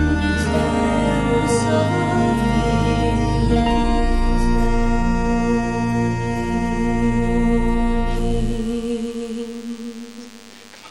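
From 8.11 s to the end, a DECT cordless phone buzz sits under the audio, around 25 dB below it. A nearby handset or base station bursts every 10 ms, which the audio circuit rectifies into a thin 100 Hz buzz. A spectrogram shows evenly spaced harmonic lines at multiples of 100 Hz, and the waveform shows a regular 10 ms pulse pattern.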